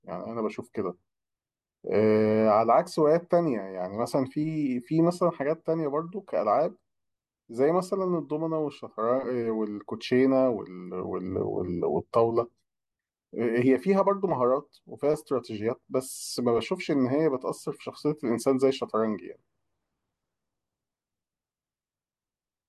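A speech recording with nothing technically wrong that can be heard. No faults turn up anywhere in it.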